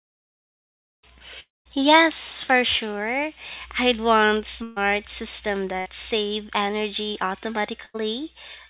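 At 1.40 to 1.67 s the sound stops arriving, most likely because of a long network dropout. About a quarter of a second of speech is lost. The last sound is stretched into a fading buzz or hiss that sinks into near-silence, and that silence dominates most of the gap. The speech then resumes further on with the missing stretch skipped. The quiet interval is what separates this from the shorter losses later in the clip.

Three bursts of packet loss follow, at 4.63 to 4.78 s, 5.80 to 5.88 s and 7.85 to 7.96 s. They remove about 140, 60 and 80 ms of speech. Each gap is bridged by the preceding sound held and turned down, a buzz on voiced sounds and a hiss on others. Unlike the dropout, the first of them does not fall into silence before the speech picks up again past the lost part. Throughout, nothing is heard above 4 kHz, which fits a G.711 mu-law call path at 64 kbps.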